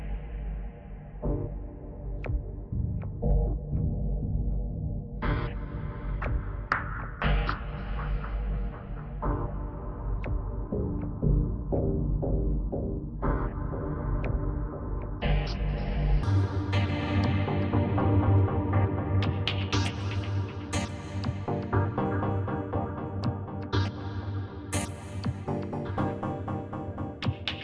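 From the start to 16.23 s the audio has a wrong sample rate fault: it runs at half speed and sits a full octave (12 semitones) low, which fits 44.1 kHz material being played back at about 22 kHz without conversion. Because tempo and pitch drop together by the same 0.5 ratio, the sound is both dragged out and deepened. This is unlike a pitch-shift or time-stretch effect, where one changes while the other holds steady.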